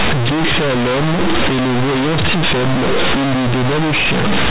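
Throughout, companded audio read as linear: mu-law bytes are played back as plain 8-bit samples without expansion, so the speech becomes loud, buzzy distortion with heavy noise in pauses.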